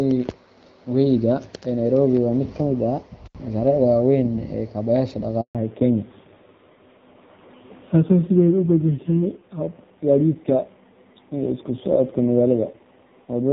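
At 3.25 s the speech drops out with a crackle at each edge, leaving only faint hiss until it returns at 3.35 s. That is an intermittent contact: a loose plug or cable briefly opened, breaking the signal for about 75 ms.

From 5.41 s to 5.55 s the voice fades within a few tens of milliseconds into 140 ms of silence, and whatever was said in that span is gone. This is a handover gap, where the call switched networks and no speech frames arrived until the new link was up.

From 5.55 s to the end the voice turns duller and rougher, with nothing above 4 kHz. This is a fallback to narrowband: the call left the clear HD Voice (AMR-WB) coding heard earlier, which fits 12.65 kbit/s, for a low-rate AMR-NB mode, consistent with about 5.9 kbit/s.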